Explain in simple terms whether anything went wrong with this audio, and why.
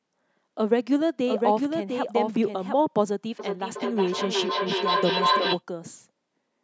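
Two things went wrong. From 1.27 to 2.81 s there is a doubled audio track. A quieter copy of the speech trails about 0.7 s behind, likely from a second, slower capture path.

From 3.39 to 5.63 s there is feedback howl. Sound loops between microphone and loudspeaker, building into a tone near 1 kHz that pulses roughly every 0.4 s and grows as loud as the speech.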